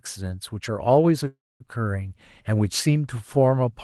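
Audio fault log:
1.27–1.62 s call audio freeze: the speech stalls for about 330 ms. The last sound stretches into a brief fading buzz, then about 240 ms of silence, before resuming exactly where it stopped with nothing lost, likely because delayed packets emptied the jitter buffer.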